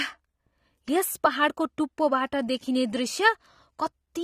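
Speech, likely squeezed through AAC compression at a low bitrate, around 32 kbps, audibly dulls and smears the whole clip, with nothing above 15.2 kHz and a warbling fizz.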